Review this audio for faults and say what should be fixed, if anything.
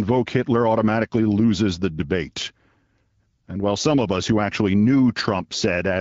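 Nothing stood out on listening to this speech, so there is nothing here that needs fixing.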